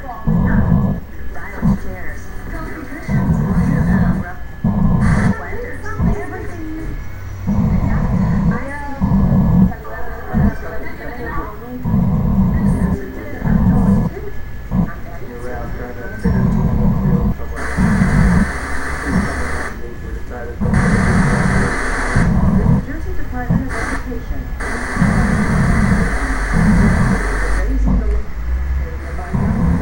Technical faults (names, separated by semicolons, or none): none